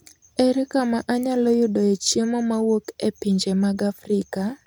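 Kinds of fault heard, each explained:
No kinds of fault are heard in this speech clip.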